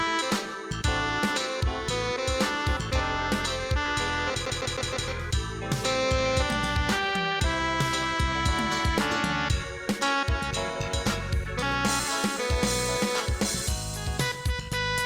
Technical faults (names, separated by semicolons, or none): CD stuck on one turn